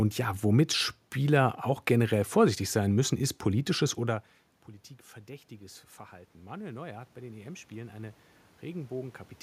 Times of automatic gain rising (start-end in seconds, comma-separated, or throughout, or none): 5.25-9.27